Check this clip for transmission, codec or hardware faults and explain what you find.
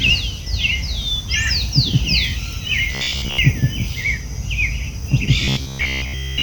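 Two bursts of robotic sound from repeated short buffers, from 2.92 to 3.39 s and from 5.45 s to the end. The likely cause is audio arriving too seldom, so a piece of about 15 ms is looped over most of the missing time. That forces a rigid, metallic 66.8 Hz buzz onto the sound.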